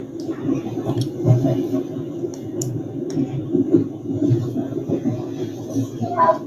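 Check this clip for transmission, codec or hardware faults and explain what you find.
One fault runs through the whole clip: a noise suppressor applied to music or sounds. A suppressor tuned for speech treats the steady parts and decaying tails of these sounds as noise and pulls them down by about 5 dB, while onsets pass. Sustained sound therefore sinks and recovers, giving an audible pumping and a thinned, choked body between attacks.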